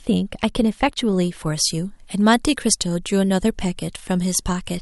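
Thin, bright and sharply sibilant speech from 1.46 s to the end, with the treble lifted by about 10 dB at 10 kHz relative to 1 kHz. This is pre-emphasis left on: a treble boost, consistent with a 50 µs FM curve, was never matched by its de-emphasis cut.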